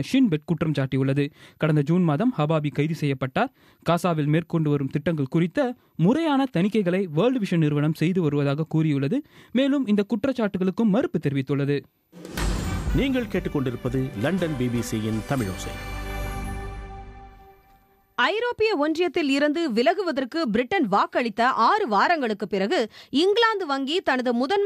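No technical faults are audible.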